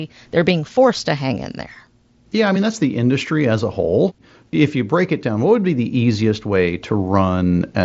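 No technical faults detected.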